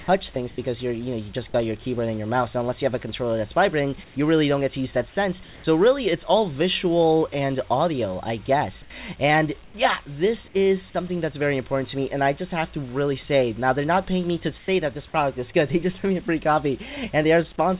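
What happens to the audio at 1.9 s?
Nothing goes wrong at 1.9 s; the audio runs intact through that moment, carried as usual by the call path, whose narrowband coding leaves nothing above 4 kHz.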